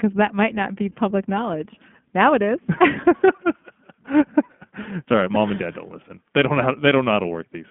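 From start to finish the speech carries the sound of the iLBC codec, and the damage is plainly audible. The band is held to telephone width, roughly 200 Hz to 3.4 kHz, so nothing above 4 kHz survives. Each 20 ms frame's excitation is coded on its own, which fits a 15.2 kbps mode and gives the speech a rough, slightly synthetic grain. A spectrogram shows a hard ceiling near 3.4 kHz and an empty low floor.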